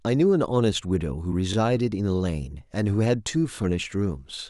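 At 1.53 to 1.56 s and again at 3.56 to 3.58 s, the speech stutters briefly because of overlapping chunks. The audio was handled in blocks of about 2 s, and each new block began roughly 21 ms before the previous one finished, so that slice plays twice at each join. It sounds like a small click or hiccup. On a waveform, the short stretch repeats with a discontinuity at the seam, and a spectrogram shows a thin vertical broadband line there.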